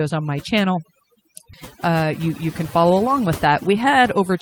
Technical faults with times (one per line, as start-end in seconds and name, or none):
0.00-4.41 overdone noise removal
1.53-1.55 skip ahead
1.87-3.07 jitter buffer speed-up
3.47-4.30 jitter buffer speed-up